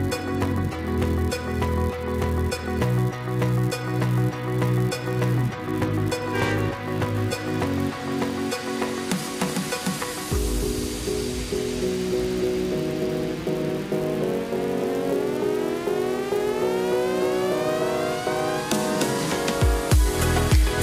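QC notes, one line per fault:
Throughout, filter restarted on every block: a steady 200 Hz buzz of tiny ticks rides under the sound, growing louder and softer with its level. The filter resets to silence every 5 ms, so each new block opens with a small transient.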